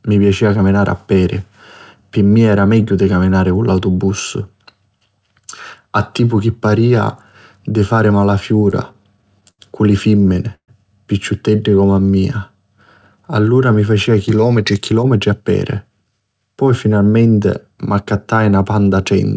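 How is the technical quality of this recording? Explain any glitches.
The speech carries four network glitches, all between about 8 and 16 seconds. It passed through a wideband call codec, with nothing above 8 kHz.

Repeated stalls (stutter), 8.49 to 9.61 s, between "di fari" and "cu li": the jitter buffer kept running empty. About ten brief gaps were filled, the longest 79 ms, so the speech drags and stutters.

Call audio freeze, 10.55 to 10.70 s: packets were likely held up. The receiver stretched the last sound for 132 ms, including 90 ms of silence, then resumed without loss.

Jitter buffer slow-down, 11.70 to 12.57 s: pitch periods were repeated to rebuild the reserve. This adds 89 ms, so the speech plays at 91% speed with unchanged pitch.

Jitter buffer speed-up, 14.42 to 16.41 s, after "mi facia": surplus buffered audio was trimmed in small pieces. About a fifth of a second is removed, and the speech sounds hurried at 109% speed.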